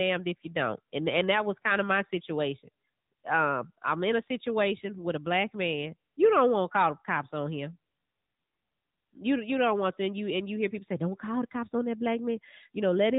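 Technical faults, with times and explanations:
Throughout: AMR narrowband mobile codec. The speech is squeezed through a phone-grade coder that rebuilds each 20 ms frame from a vocal-tract filter fed by a few pulses, so the voice takes on a plainly audible buzzy, synthetic edge. Everything above about 3.8 kHz is gone, leaving a boxy, telephone-like sound with dull consonants. The degree of roughness fits an upper mode near 10.2 kbps rather than its lowest settings.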